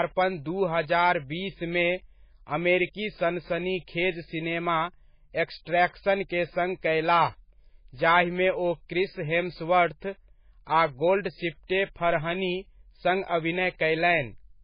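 Throughout, the speech has no content above 5 kHz and sounds watery and swirly, with smeared consonants, damage that likely comes from heavy MP3 compression at a very low bitrate.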